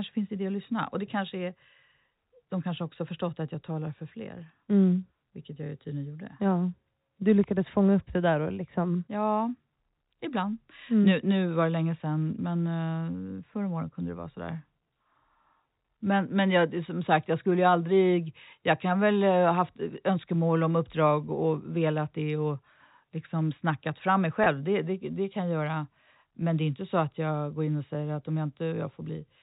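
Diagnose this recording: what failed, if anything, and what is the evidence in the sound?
Packet loss with pitch repetition, network stage, at 24.44 to 24.46 s. For about 20 ms the speech briefly holds on a slightly buzzy, sustained tone instead of moving on. That gap length fits a single lost packet. The receiver's concealment bridged it by repeating the last pitch period, so the gap is smoothed over rather than cut to silence. The G.711 telephone coding carrying the call can be heard limiting the band to below 4 kHz.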